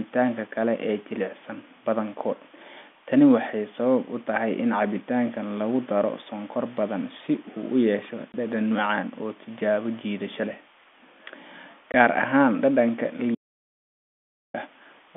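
At 2.08 s a single sharp tick cuts through the speech, a bit error spike where one flipped bit briefly throws a sample far off its value. At 8.32 s and again at 11.92 s, 20 ms holes of dead silence open; this is packet loss filled with silence, each gap fitting one lost 20 ms packet. From 13.35 s to 14.54 s the sound vanishes completely for about 1.2 s, with no room tone at all, an audio dropout to silence, likely from the input briefly disconnecting while silence was still recorded. Throughout, the speech carries the narrow telephone band of G.711 A-law coding, running roughly 200 Hz to 3.5 kHz.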